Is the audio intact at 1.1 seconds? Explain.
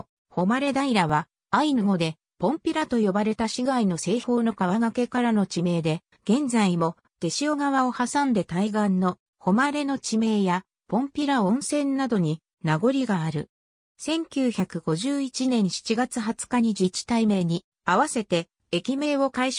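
No. At about 1.10 s there is a dropped buffer (overrun): a jump where the sound skips forward by a few milliseconds with no pause. The likely cause is that the recording program did not read a block of samples before the hardware overwrote it, so the audio on either side is spliced directly together. Unlike an underrun, which inserts a brief silence or gap, nothing is added here; a sliver of sound is simply missing.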